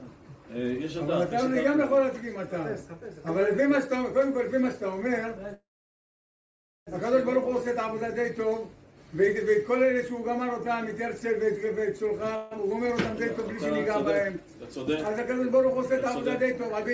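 Call audio freeze at 5.54 to 6.89 s: the sound trails into a fading fill, then about 1.2 s of silence, and resumes exactly where it stopped, likely because delayed packets emptied the jitter buffer. Another call audio freeze at 12.36 to 12.53 s is a brief 0.15 s fill without silence. Throughout, nothing is heard above 8 kHz, consistent with a G.722 call path.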